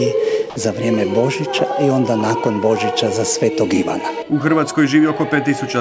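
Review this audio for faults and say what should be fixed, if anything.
From 0.50 to 0.56 s, about 60 ms of sound drops out and is replaced by a steady hiss. This is sound dropped by the voice detector, likely at the sending end. The detector judged that stretch to be background and stopped transmitting. The receiver filled the gap with comfort noise until the detector triggered again. The band above 8 kHz is empty throughout, which fits a G.722 call codec. To prevent the dropout, lower the detector's threshold or lengthen its hangover time, or turn off discontinuous transmission.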